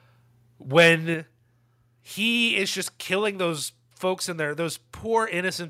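Right around 0.77 s, running to 0.88 s, the loudest stretch of speech picks up a gritty, crackly edge. That's microphone overload. The peaks are flattened at the top because the signal runs roughly 4 dB past what the converter can represent. It's brief, and only a small share of samples, something like 2 percent, are clipped, but it's enough to hear as harshness on the syllable peaks. The likely cause is a microphone input level set too hot.

Then at 1.14 s the whole thing, voice and background together, drops by about 4 dB in a single step. That's the microphone volume stepped down. It comes just a fraction of a second after that distorted burst, so the likely story is the call software spotting the clipping and pulling the input gain down to stop it. You hear it as an abrupt shift to a quieter level rather than a smooth fade.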